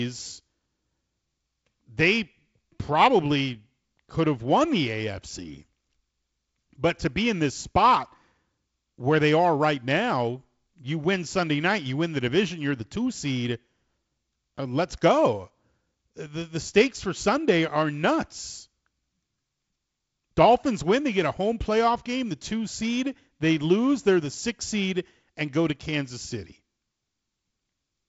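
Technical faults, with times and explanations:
No technical faults can be heard in this speech clip. It has passed through G.722 wideband telephone coding, with nothing above about 7.7 kHz, a faint hiss in the upper band, and a slightly grainier lower band that fits the 48 kbit/s mode.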